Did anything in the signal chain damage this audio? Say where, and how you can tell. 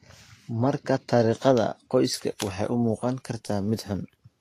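Yes, two things. The whole clip has plainly audible lossy-codec damage: the treble is hissy and grainy, attacks are smeared, and there's nothing above about 14.2 kHz. That's the codec stage, likely Vorbis at a low setting, consistent with something around 34 kbps. At that rate the encoder drops the cut-off and quantises the upper bands so coarsely that fine detail turns into noise of similar energy, which is the roughness you hear.

Separately, from the start to about 2.14 s the top end is dulled, then it opens up for the rest of the speech. That's channel delay (comb filtering): one channel ran a couple of samples late, roughly 0.05 ms, somewhere in the driver or buffer path, and the pair got summed to mono. Anything common to both cancels at evenly spaced frequencies, and with a delay that short the first notch lands around 10 kHz.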